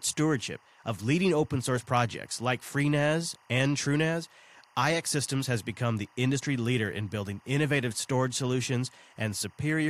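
Speech runs over a faint, steady chirping warble from start to end, which is timecode bleed: 24 fps linear timecode leaking from a neighbouring track or cable, roughly 35 dB below the voice. On a spectrogram it shows as constant flickering bands near 1 and 2 kHz.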